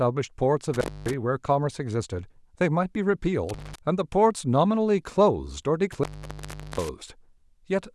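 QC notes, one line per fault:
0.74–1.13 s, 3.49–3.78 s and 5.92–6.89 s: intermittent contact. The speech cuts out for about 0.25 s, 0.19 s and 0.75 s as a loose cable or plug connection opens and then closes again. Each break is framed by crackle where the contact scrapes and bounces, and faint hiss remains while the line is open. On a waveform the signal collapses to a near-flat line bordered by spiky bursts. A spectrogram shows broadband vertical streaks at the edges around an empty gap.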